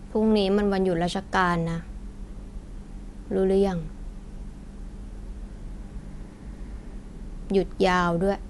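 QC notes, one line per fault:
Throughout: Dolby Digital compression. The speech sounds dull and band-limited, with nothing above about 11.4 kHz, and the codec damage is plainly audible as a rough, fluttering noise wrapped around tonal parts of the voice. This is likely low-bitrate AC-3 style coding, which fits a rate around 64 kbps: the encoder narrows the bandwidth and leaves many frequency lines without mantissa bits, so the decoder fills them with dither noise that smears and roughens the tones.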